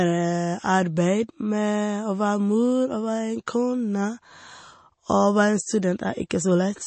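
From start to finish the speech carries plainly audible damage, likely from MP3 compression. Nothing is heard above 8.3 kHz, so the top octave is simply gone and the sound is dull. The encoder seems starved of bits, which fits a low bitrate near 32 kbps. Weak frequency lines are zeroed and return from frame to frame. That gives a watery, swirling texture. S sounds turn metallic and chirpy, and attacks smear.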